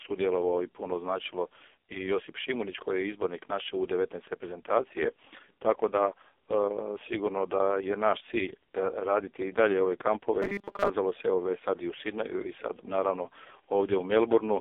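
A speech recording carried through the AMR narrowband mobile codec, heavily damaged, with a character that fits the lowest AMR-NB mode, around 4.75 kbps. The band is confined to roughly 300 Hz to 3.5 kHz, and nothing above 3.5 kHz survives. On a spectrogram that appears as a hard ceiling with empty space above it and a thin gap at the bottom. The voice comes across buzzy and synthetic because so few bits describe each frame's excitation pulses and vocal-tract shape. From 10.42 to 10.90 s there is a robotic sound from repeated short buffers. A rigid metallic 200 Hz buzz takes over most of that stretch while still loosely tracing the speech. The likely cause is late-arriving audio being padded by looping a 5 ms chunk, one period of 200 Hz, so the underlying speech in that span is skipped. A waveform would show identical short cycles repeating, and a spectrogram would show evenly spaced horizontal harmonics at multiples of 200 Hz.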